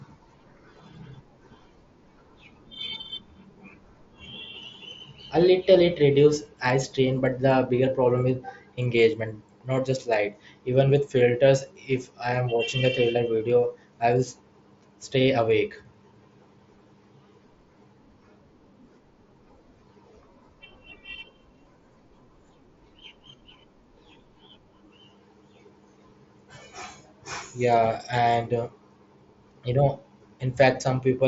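Nothing stood out on listening to this speech recording, which comes through a Bluetooth mSBC headset link with its content ending near 7.7 kHz.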